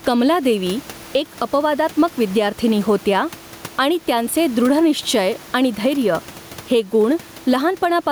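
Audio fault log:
Throughout: gain pumping. The room noise is about 29 dB below the speech. Level swings by around 10 dB. This likely comes from gain set too high, with a fast limiter squashing loud parts.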